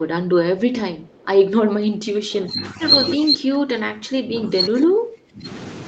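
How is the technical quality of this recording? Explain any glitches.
The recording has two kinds of glitches, an echo leak and repeated speech dips, on top of a call path whose sound points to Opus at around 32 kbps with nothing above 8 kHz.

From 0.98 to 1.26 s there is an echo leak. A very faint copy of the speech returns about 314 ms late. This is likely far-end audio that got past an echo canceller.

From 1.6 to 2.81 s and from 3.15 to 5.46 s, the speech is suppressed in double talk. The voice drops sharply in pieces, deeply at its worst. The likely cause is an echo canceller ducking it while the other side talked.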